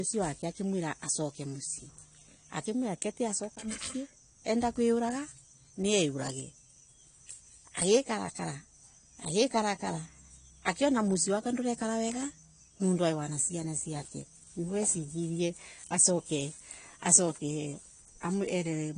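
A speech recording with plainly audible AAC compression damage from start to finish. Nothing is present above 10 kHz, so the top end sounds dull and closed in. The texture is smeared, with a watery, warbling edge. The likely cause is a low-bitrate AAC-LC encode, which fits a rate of around 32 kbps. With too few bits per frame, the encoder drops the highest frequencies and coarsely quantises the rest.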